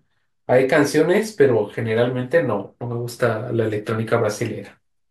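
No technical faults can be heard in this recording.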